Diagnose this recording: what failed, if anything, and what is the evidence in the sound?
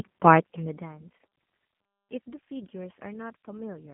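The failure is at the codec stage. G.729 coding affects the whole speech clip. The band stops near 150 Hz and 3.4 kHz. The codec damage is plainly audible; the speech sounds slightly rough and synthetic, rebuilt from a tract filter and sparse pulses, which fits an 8 kbit/s stream.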